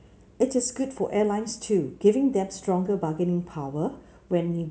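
A short speech recording with no technical fault anywhere in it. There is nothing to locate in time and no cause to trace.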